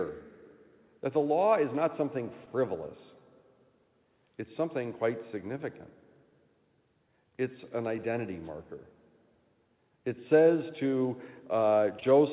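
Clock drift between sender and receiver runs through the whole clip: the sender's clock is about one and a half percent slow, so the jitter buffer keeps running short. The tempo feels faintly unsteady, and on a waveform event spacing creeps slightly out of step with a steady grid.

From 1.39 s to 8.76 s the receiver makes repeated timing corrections, stretching the audio to 99% speed and repeating short pieces that add about 70 ms in total. These sound like tiny stutters. On a spectrogram they appear as briefly smeared, duplicated frames at uneven intervals.

Between 7.30 s and 12.04 s come scattered short gaps, around five of them, the longest about 20 ms. The receiver fills roughly 70 ms by continuing the last sound, which leaves faint ticks or smears. Each shows as a short, flat, frozen band in the spectrogram, set against a band-limited picture from the G.711 call path with nothing above 4 kHz.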